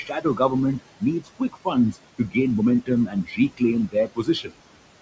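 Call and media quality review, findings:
Noise suppressor artifacts throughout the speech. Background noise drops away in the gaps and swells back under each phrase. Probable component: noise suppressor, attenuating bands judged to be steady noise by about 20 dB frame by frame. Room noise sits about 13 dB below the speech. The top end stops at 8 kHz, consistent with a 64 kbps G.722 call path.

Speech cut by the noise suppressor at 0.04–0.4 s, 1.2–1.67 s, 2.18–2.36 s, 3.07–3.61 s and 3.88–4.54 s. Speech sounds swallowed or faint for a fraction of a second in each span. Dips reach about 14, 17, 16, 15 and 19 dB. Probable component: noise suppressor, misclassifying quiet speech energy as noise and pulling it down with the background.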